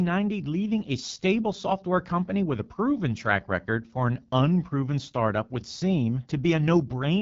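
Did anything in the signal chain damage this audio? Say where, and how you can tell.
Yes. The damage sits at the codec stage and runs through the whole speech clip: this is the AMR wideband (HD Voice) codec at a low rate. The speech sounds rough and raspy throughout, and nothing is present above about 7.4 kHz. The vocal tract model and pulse excitation can't track the voice closely at this rate, and the top band is synthetic noise, which points to one of the lowest modes, around 8.85 kbit/s.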